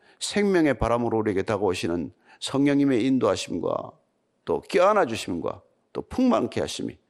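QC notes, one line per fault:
Throughout, MP2 compression: the speech sounds dull and muffled, with a gurgling, granular grit on every stretch of sound, the damage plainly audible. This is likely MPEG Layer II coding, which divides the spectrum into 32 equal sub-bands and shares bits among them. Starved of bits, which fits a low rate near 80 kbps, the upper bands drop out or flicker on and off, and the remaining bands are quantised coarsely, producing that churning texture.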